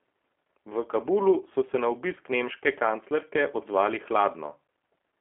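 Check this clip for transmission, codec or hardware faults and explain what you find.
One codec fault is present. G.729 codec damage runs throughout. The codec rebuilds speech from a vocal tract model and a few pulses per frame, which fits 8 kbit/s. The audio sounds rough and synthetic. The band runs from 250 Hz to 3.4 kHz, and nothing passes above 3.8 kHz.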